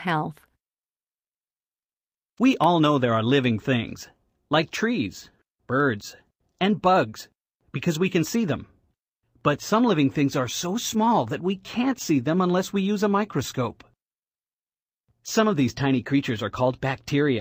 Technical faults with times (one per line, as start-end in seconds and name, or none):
0.00-17.41 clock drift between sender and receiver
0.11-17.30 repeated timing corrections